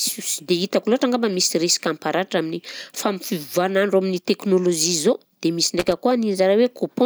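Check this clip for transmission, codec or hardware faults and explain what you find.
One hardware fault is present. From 5.79 to 5.97 s, just after "dia misy", a loose connector crackle occurs: a worn or dirty contact intermittently opens and closes, chopping the signal and adding pops from stray DC, heard as a brief, irregular scratchy burst of crackle.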